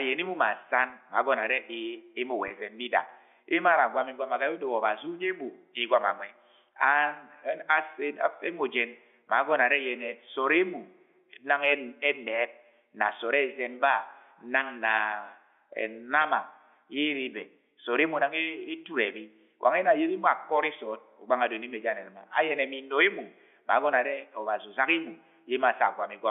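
At 0.90 to 0.92 s, 2.48 to 2.50 s and 16.22 to 16.24 s, the speech briefly hangs on a slightly held, buzzy tone before carrying on. Each is packet loss with pitch repetition. About 20 ms of audio went missing, which points to a single lost packet each time, and the receiver filled the hole by looping the last pitch period, too short to fade into silence. The G.711 telephone band, limited to roughly 300 Hz to 3.5 kHz, is audible throughout.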